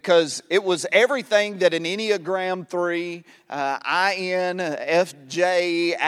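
No dropouts, distortion, noise bursts or other technical faults are audible anywhere in the recording.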